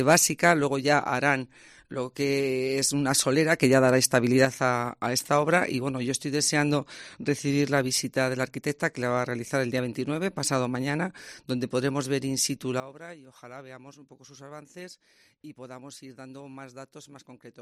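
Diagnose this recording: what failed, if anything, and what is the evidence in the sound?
A digital gain stage likely changed its setting between adjacent samples with no ramp, causing a sudden gain jump. Sound and background noise rise together by about 6 dB from 3.62 s to 4.45 s, then at 12.8 s fall by about 16 dB until the end.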